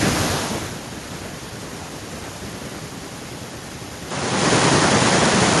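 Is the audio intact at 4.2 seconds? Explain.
No. From 4.11 s onward the speech dulls, losing everything above 10.5 kHz and gaining faint new background noise, likely from an input switched to a poorer device.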